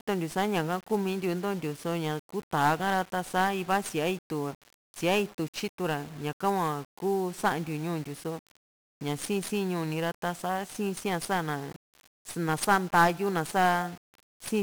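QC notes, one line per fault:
Throughout: 1-bit DFPWM compression. One bit per sample steers an adaptive level, which fits a 48 kbps stream, leaving speech fuzzy and crackly, with treble drowned in hiss.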